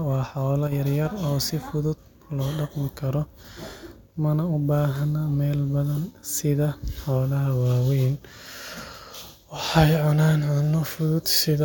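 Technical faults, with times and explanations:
0.67 to 0.72 s, one channel drops out: for about 50 ms, likely one side of the stereo path stopped delivering samples, so the mono sum carried only the remaining channel. The speech, shared by both sides, falls abruptly by about 6 dB right after "waa xoolo", and anything present only in the lost side vanishes. Full level returns just as abruptly before "yar yar oo si".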